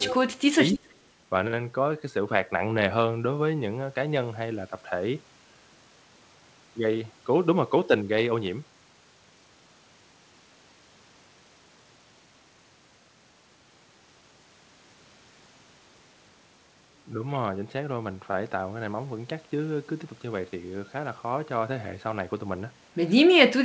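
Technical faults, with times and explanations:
0.0–0.6 s, speech suppressed in double talk: the voice dips by around 30 dB and breaks up, for roughly half a second in total, likely because the echo canceller mistook talk during loudspeaker playback for echo. The waveform shows collapsed stretches, and the spectrogram shows gaps.
0.04–0.14 s and 0.72–0.94 s, echo leak: short scraps of a delayed copy of the far voice come back about 0.29 s late, around 15 dB below the speech, likely from loudspeaker pickup the canceller missed. The spectrogram shows faint repeated patterns trailing the originals.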